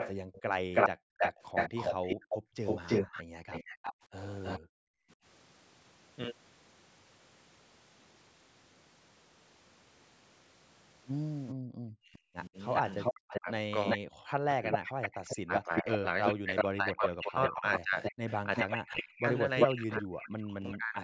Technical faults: echo leak; background gated by the echo canceller; speech suppressed in double talk

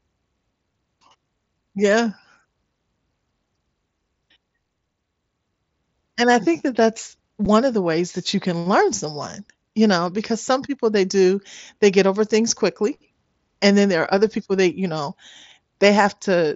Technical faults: unconcealed Bluetooth headset packet loss

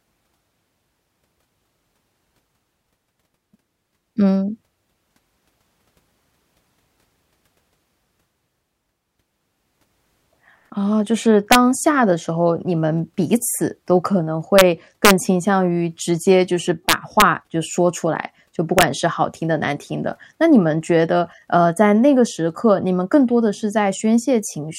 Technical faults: integer overflow

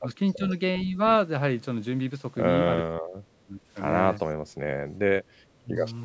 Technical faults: speech suppressed in double talk; echo leak

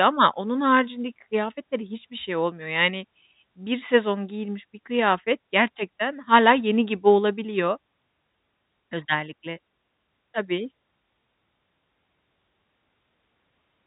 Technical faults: none

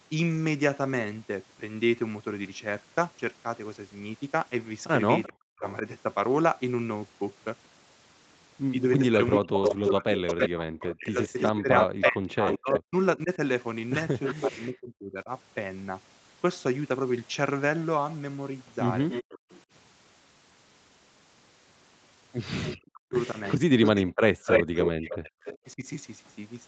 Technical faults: echo leak; speech suppressed in double talk; background gated by the echo canceller

